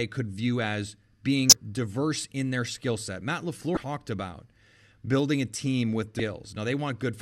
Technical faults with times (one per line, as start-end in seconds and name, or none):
1.49-1.53 damaged data in a compressed stream
3.74-3.77 damaged data in a compressed stream
6.17-6.20 damaged data in a compressed stream